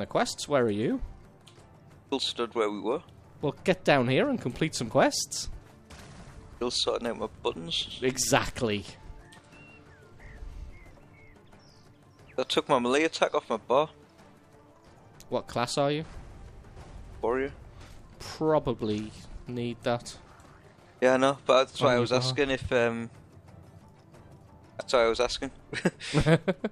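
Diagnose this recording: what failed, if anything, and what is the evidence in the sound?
At 4.91 s the sound skips, likely audio missing between chunks in buffering. About 50 ms is lost, seen as an abrupt, gapless waveform splice.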